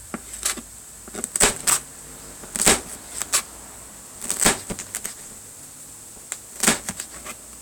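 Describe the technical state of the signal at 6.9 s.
At 6.9 s buffer tearing is present, running from 1.42 s to the end. About half of each buffer replays audio roughly 10 ms old, producing a 200 Hz robotic buzz.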